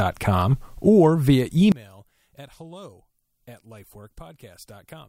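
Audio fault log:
0.51–1.15 s, drift correction step: the speech slows by about 5.9% and drops about 106 cents, roughly a semitone, then snaps back, likely from clock-matching software stepping its playback rate. A spectrogram shows the harmonic ladder stepping down, then jumping up.
1.72 s to the end, one channel inverted: summed to mono, the centred speech collapses by about 24 dB, leaving a faint residue, likely because one channel's polarity is reversed. The mono trace flattens sharply.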